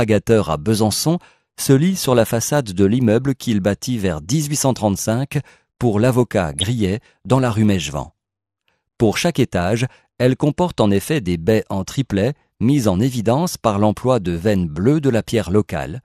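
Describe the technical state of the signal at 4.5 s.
At 4.5 s you're hearing MP2 compression, and it runs through the whole clip. Upper sub-bands keep switching off for lack of bits, so it sounds dull, with a gurgly, grainy edge. That's likely a low-rate MP2 encode, which fits something around 80 kbps.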